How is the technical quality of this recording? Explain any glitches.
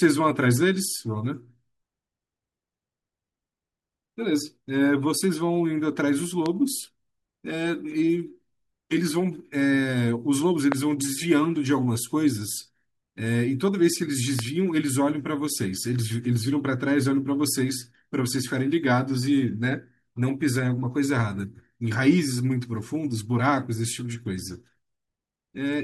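Three loud pops interrupt the speech, at 6.46–6.48 s, 10.72–10.74 s and 14.39–14.41 s. Each is a single sharp click peaking about 15 dB above the speech, which continues underneath. The likely cause is a brief voltage spike from a switch, static or driver glitch added to the signal.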